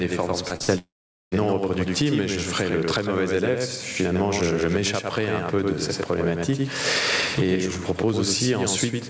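Right from the start there's a doubled audio track: a second full-band copy trails about 100 ms behind, roughly 5 dB down, likely from a second, slower capture path. Gain pumping runs throughout too, with the gain swinging by around 20 dB, likely because the mic gain is set far too high and a fast limiter is clamping it.

At 0.48 s and 0.56 s come two short concealed packet losses, each a quick smear where the decoder papered over 20 to 40 ms of missing audio.

From 0.62 to 0.70 s a burst of packet loss follows, a fading buzz or hiss covering about 60 ms that never arrived, before the audio resumes further on.

Then from 0.78 to 1.34 s there's a long network dropout, likely a stall in the connection. The last sound is stretched and fades, leaving about 0.45 s of silence and roughly 0.54 s of audio gone, all within the call's 8 kHz bandwidth.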